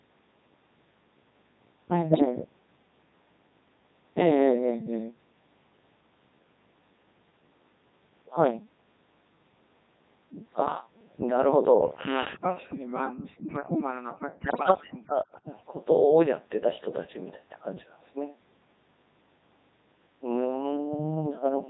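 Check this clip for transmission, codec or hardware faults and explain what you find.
Three faults affect the speech: a low-rate vocoder throughout, two bursts of radio bit errors, and two stretches where the talker is pushed down during double talk.

Codec 2 vocoder, whole clip: at 3.2 kbit/s the voice is rebuilt from sine waves out of pitch and envelope data, so it sounds robotic and buzzy rather than smeared, as a waveform codec would.

Bit errors on digital voice radio, 2.11 to 2.25 s and 14.44 to 14.72 s: corrupted frame parameters throw pitch, level and tone colour around, giving bleeps and warbles instead of the clean silence a dropout would leave.

Speech suppressed in double talk, 12.75 to 13.46 s and 13.81 to 15.46 s: the voice sinks by roughly 40 dB, likely because an echo canceller muted the talker while the far end spoke.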